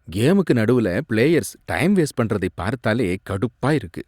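At 2.61 s the speech skips ahead where roughly 10 ms of audio is missing, joined straight across with no gap of silence. This is likely a dropped buffer (overrun), where samples were overwritten by the hardware before the software collected them.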